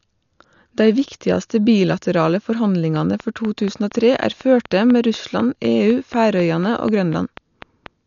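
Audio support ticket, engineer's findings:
Dull, band-limited speech throughout, nothing above 7 kHz, rough fluttering noise around voiced tones. Likely Dolby Digital compression at a bitrate that fits about 48 kbps: unallocated mantissas filled with dither noise. Unlike plain low-pass filtering, the fill noise moves with the signal.

Train of clicks from 2.96 to 7.87 s, regular at 4.08 per second, about twenty, peaking about 5 dB above the speech. Likely external interference or a failing interface. Same shape each time and present in pauses, so not codec damage or random crackle.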